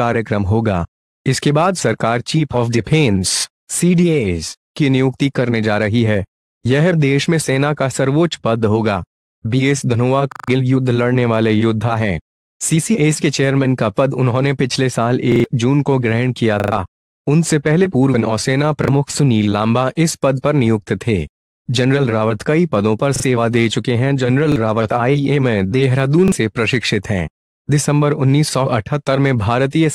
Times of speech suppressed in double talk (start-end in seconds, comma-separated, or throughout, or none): none